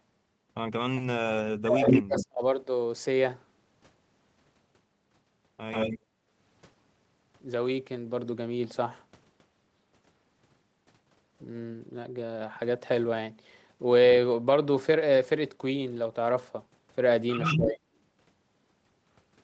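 From 1.4 to 2.43 s, speech is suppressed in double talk: the echo canceller, likely confused by both sides talking, pulls the voice down by as much as about 40 dB, so the waveform caves in and the spectrogram goes dark in patches. Inside that stretch, from 1.85 to 2.26 s, an echo leak brings back a copy of the voice 142 ms late and somewhat louder than the speech itself, which likely got past the far side's canceller. On the spectrogram it shows as repeated, time-shifted harmonic bands.

Fainter echo leaks, a little below the speech level and delayed 126 ms, follow at 5.71 to 5.99 s and at 17.42 to 17.68 s. Between them, from 6.02 to 6.25 s, the background is gated by the echo canceller. The room noise drops by about 15 dB, and the noise floor shows a brief notch before it recovers.

From 17.56 to 17.81 s, speech is again suppressed in double talk, a shallower dip of roughly 15 dB that thins the waveform's envelope.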